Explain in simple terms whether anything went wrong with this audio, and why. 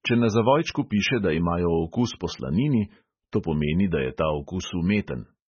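MP3 compression affects the speech from start to finish. Everything above about 6.6 kHz is missing, so the voice sounds dull and muffled, and there is heavy watery, swirling damage on top. The likely cause is an encoder squeezed for space: it threw away the treble entirely and dropped quieter parts of the sound, which flicker in and out from moment to moment and smear the starts of sounds.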